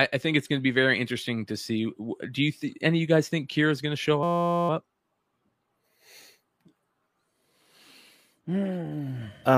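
At 4.23 s, just after "going to show", the speech locks into a system hang loop lasting until 4.69 s. The driver or machine stalled while the playback hardware kept recycling one tiny 5.8 ms slice of its ring buffer, which fits a 256-sample buffer. Repeated dozens of times at 172 Hz, the slice fuses into a steady, hard-edged buzz. A waveform shows one identical short cycle tiled end to end, and a spectrogram shows rigid horizontal harmonics spaced 172 Hz apart.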